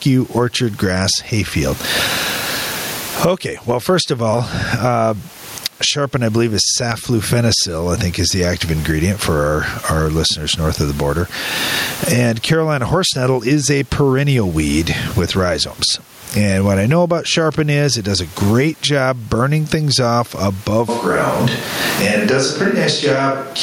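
Gain pumping runs through the whole clip. The gain rises in each pause and ducks under every loud syllable, swinging by around 25 dB. The likely cause is gain set far too high, with a fast limiter clamping it down. The speech sounds squashed.

At 20.89 s, just after "job burning things off", the sound likely switches to a distant microphone until the end. It turns hollow and roomy, with thinner bass. The level barely changes, but background noise rises to roughly 30 dB below the speech, up from about 36 dB before.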